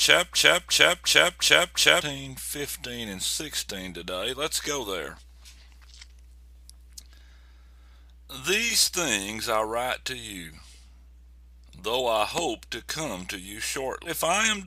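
From the very start to 2.01 s, a broken-record loop is already under way: a 355 ms fragment repeats exactly, back to back, five times. The likely cause is a stalled player or stream resending its last buffered fragment, so the intended audio for that stretch is lost.

At 14.05 to 14.11 s, a stream segment skipped shows as an abrupt jump forward with a brief blip. A segment of the stream likely failed to load and playback resumed with the next, dropping that portion of the programme.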